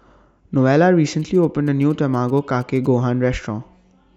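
From 1.20 s to 2.86 s, GSM signalling bursts break in: a nearby 2G handset is sending short groups of radio bursts while signalling, and the audio circuitry rectifies that RF into the speech path. The result is a galloping dit-dit-dit of brief buzzes at 216.7 Hz, sitting well under the speech, around 30 dB down, so it reads as a faint rhythmic chatter riding beneath the talker.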